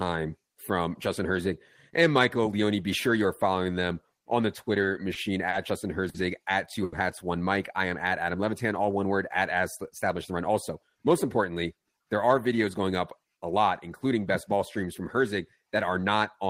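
Right after "following them on the", at 4.81, 5.13, 5.49, 6.09 and 6.84 s, there's a run of short stalls from late packets. The buffer ran dry, so each sound gets held 20 to 80 ms with a slight buzz or dip, and nothing is lost. From 10.3 to 11.5 s a jitter buffer speed-up trims about a tenth of a second of pitch periods, so the speech runs about 7% fast at the same pitch.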